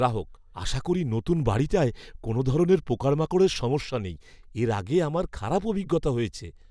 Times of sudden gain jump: none

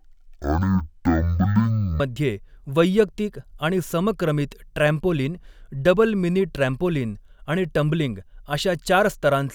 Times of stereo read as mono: 0.00-2.00

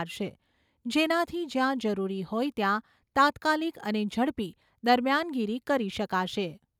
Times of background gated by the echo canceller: none

